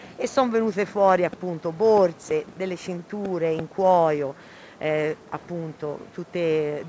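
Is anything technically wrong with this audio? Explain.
No, nothing is technically wrong with this audio.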